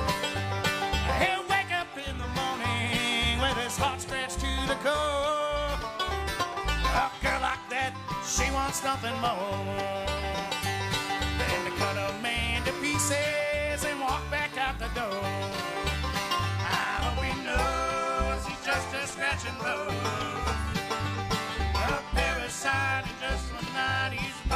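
From 9.52 s to 15.69 s, a digital radio blends to analogue FM. The digital signal dropped out, so the receiver cross-faded to the FM broadcast over about a quarter second. Hiss rises, about 35 dB below the signal. Level falls about 1 dB.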